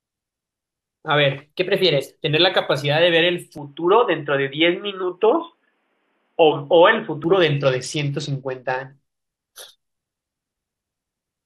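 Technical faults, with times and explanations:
1.41 to 2.29 s, drift correction step: the speech briefly runs about 6% fast and rises roughly a semitone (103 cents) in pitch, then snaps back. This is likely clock-matching software speeding playback in one step to drain its buffer, so speed and pitch move together.
3.58 to 7.24 s, input switched to a poorer device: the speech abruptly turns dull and boxy, with nothing above 3.8 kHz, no gap at the change, little level change and a faint new noise floor well below the signal. A likely mid-recording switch to a narrower-band microphone or headset profile.
5.03 to 6.52 s, drift correction step: here the speech slows by about 6% and drops roughly a semitone (110 cents) before returning to normal. Likely the clock-matching software stepping the rate down in one go to refill its buffer, shifting speed and pitch together.
7.60 to 8.92 s, Bluetooth SBC bit pool drop: the treble dulls and a gritty, coarse noise rides on the speech until it recovers. 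The sound fits the SBC bit pool falling from 31 to 9, near 72 kbps, leaving the top sub-bands starved and the rest roughly quantised.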